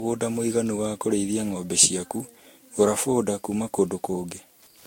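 Speech recording with two faults running throughout. A Wi-Fi radio close to the audio circuit is being rectified into it, producing Wi-Fi interference: a steady tick every 102.4 ms, about ten per second, sitting roughly 40 dB below the speech. The audio was likely decoded and re-encoded many times with a lossy codec, and that generation loss makes the sound swirly, smeared and hollow, with blurred onsets and nothing above 16.7 kHz. Its character fits repeated Vorbis passes at around 65 kbit/s.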